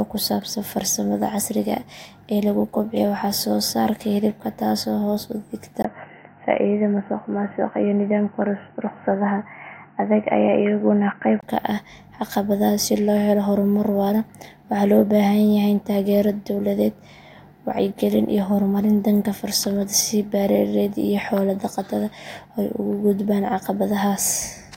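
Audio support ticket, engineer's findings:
Input switched to a poorer device, 5.82 to 11.43 s. Speech turns dull and boxy, nothing above 3 kHz. Brief 20 ms dropout at the switch, just before "ka ah", level unchanged, faint new background noise well below the speech. Likely a change of capture device to a narrowband input. Full bandwidth returns at 11.43 s.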